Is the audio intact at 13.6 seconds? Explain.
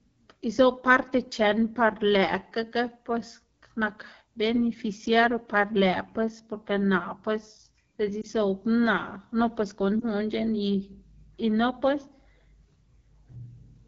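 No. At 13.6 seconds the speech sounds rough and raspy, with a gritty, buzzy texture. This is AMR wideband (HD Voice) codec damage, present throughout the clip. The codec rebuilds speech below 6.4 kHz from a pulse-excited vocal tract model and fills 6.4 to 7 kHz with shaped noise. The roughness fits one of its two lowest modes, 8.85 kbit/s, where the pulse excitation is too sparse to sound clean.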